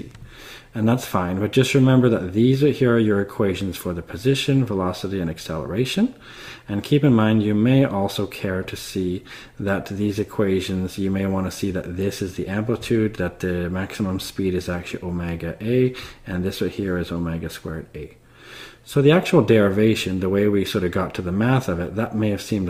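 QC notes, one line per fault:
throughout, clock drift between sender and receiver: the sender's clock runs about one and a half percent slow, so the receiver's buffer keeps draining and the timing never settles.
0.10–22.60 s, repeated timing corrections: the receiver keeps repeating small pieces to fill the gap, stretching playback to 98% speed and adding about 0.4 s, each edit small.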